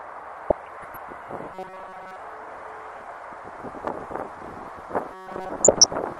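Throughout, the sound is dull and granular, with a gurgling edge where the upper sub-bands lose bits and flicker. This is likely MP2 compression, and the degree of damage fits a bitrate around 80 kbps.

From 0.44 to 1.06 s, DAB burbling breaks out as bubbling chirps and squelches. Bit errors slip past error correction and make single sub-bands jump in level, which is erratic rather than steady like the compression dullness.

From 1.53 to 2.16 s, a robotic sound from repeated short buffers takes over: a rigid metallic buzz locked at 188 Hz, likely from a chunk of about 5.3 ms being replayed while new audio lags. Its fixed pitch separates it from the random burbling.

The same buzz returns at 188 Hz from 5.12 to 5.49 s.

DAB burbling follows again from 5.63 to 5.97 s with the same muddy squelching.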